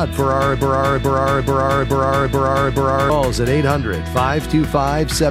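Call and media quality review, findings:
Broken-record loop, 0.61 to 3.10 s. A 430 ms fragment repeats six times back to back. Likely a stalled player or stream resending its last buffer. The audio for that span is lost.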